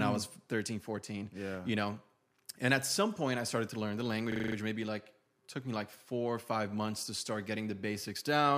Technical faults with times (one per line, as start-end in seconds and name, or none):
4.32-4.56 system hang loop